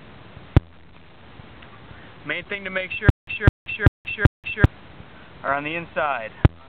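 From 3.10 to 4.66 s, a stutter with silent gaps: a 217 ms fragment repeats four times, each followed by 171 ms of digital silence, likely a stalled stream, unlike random dropouts.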